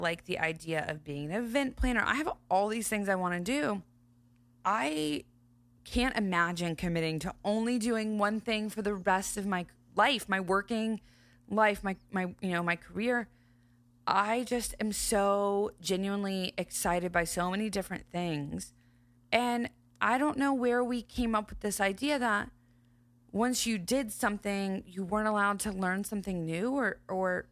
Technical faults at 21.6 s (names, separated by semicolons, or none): none